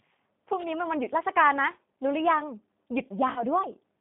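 G.729 coding runs throughout: the speech is rebuilt from a vocal-tract filter, a pitch predictor and a few pulses per frame, which fits an 8 kbit/s codec. Damage is plainly audible: a rough, synthetic edge, with the band held to about 150 Hz to 3.7 kHz.

VoIP packet loss concealed by the speech codec occurs from 3.33 to 3.43 s. About 30 ms of audio went missing, which points to a single lost packet. The decoder extended its last pitch and filter at falling gain, giving a brief fading stretch. The sound stays weak or distorted until about 3.43 s as the decoder recovers frame by frame.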